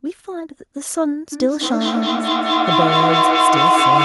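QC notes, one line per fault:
1.32–4.04 s, feedback howl: a tone around 1 kHz swells up out of the speech and keeps climbing until it peaks at about 7 dB over the talker, pulsing roughly every fifth of a second. That's the mic picking up a loudspeaker carrying the same call, so each trip round the loop comes back louder and narrower until only the frequency the loop favours is left. The pulse rate is the loop's round-trip delay. It's still going when the clip ends.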